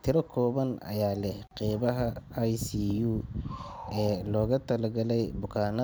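It's a speech clip with a gap at a join of encoded pieces: about 40 ms of silence at 1.47 to 1.51 s, where separately encoded chunks were butted together with their padding left in.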